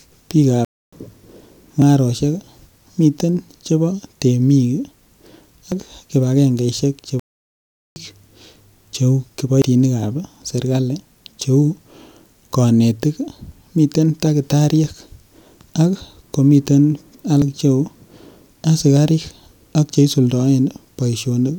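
At 0.65 s the speech halts in a playback stall lasting 0.28 s, until 0.93 s, likely because the player ran dry or its thread was blocked. On a waveform this is a flat, empty gap, and on a spectrogram it is a clean vertical band with no energy before the sound resumes.

From 1.82 s, short stretches of audio are missing between chunks at 1.82, 5.72, 9.62, 13.52 and 17.42 s, roughly a tenth of a second each time. This likely comes from processing in 4-second chunks that loses a slice at each handover. The sound skips forward with no pause. A waveform shows an abrupt join, and a spectrogram shows a sudden discontinuity in harmonics and formants.

A second, longer playback stall runs from 7.20 to 7.96 s, 0.77 s of dead silence that again looks like a flat gap in the waveform.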